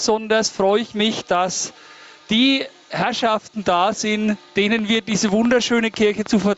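Gain pumping runs through the whole clip. The level drops by about 15 dB as soon as a loud sound arrives, so loud and quiet passages sit unnaturally close together and the sound feels squashed. The likely cause is input gain set far too high, with a fast limiter or compressor clamping it on each peak. A noise gate would cut the background off in the pauses, whereas pumping moves the whole level up and down.

From 4.79 s to the end at 6.58 s, a train of clicks rides over the sound at a steady pace of about six per second. Each tick has much the same sharp shape and peaks a few decibels above the material, and the clicks carry on through the pauses as well. That steady rhythm and near-identical shape set it apart from random crackle or codec glitches. The likely source is electrical interference or a faulty connection or power supply injecting pulses. All of this sits within the call path's 8 kHz bandwidth.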